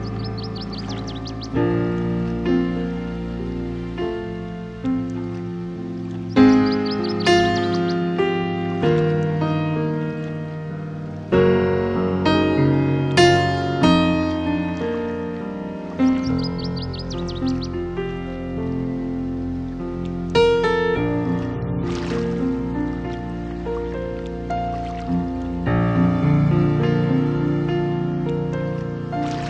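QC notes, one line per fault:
No faults heard anywhere in this clip.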